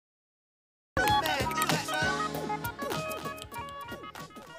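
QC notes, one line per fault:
0.00–0.97 s, cut-off start: digital silence until 0.97 s, then the sound enters mid-event with no attack or fade, as if recording began late.
2.84 s to end, doubled audio track: a second full-band copy roughly 300 ms behind and about 10 dB quieter, cutting in abruptly, likely from a slower second capture path.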